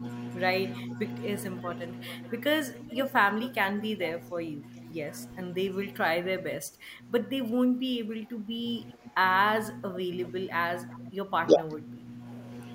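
Speech suppressed in double talk, 0.0 to 1.0 s: the speech dips briefly by a few dB, likely because the echo canceller misread overlapping talk as loudspeaker echo and turned it down.

Echo leak, 1.4 to 4.21 s: a faint copy of the speech returns about 414 ms late and about 20 dB down, likely residual loudspeaker pickup the far end's echo canceller failed to remove.

Speech suppressed in double talk, 4.33 to 4.62 s: another short, shallow dip of a few dB, likely the same canceller clamping during overlapping talk.

Speech suppressed in double talk, 6.6 to 12.24 s: a longer stretch where the speech sinks repeatedly, by up to about 15 dB and for roughly three seconds in total, likely heavier suppression while both sides overlapped.

Echo leak, 10.92 to 10.96 s: a brief scrap of returned speech, about 394 ms late and about 25 dB down, likely residue slipping past the far end's echo canceller.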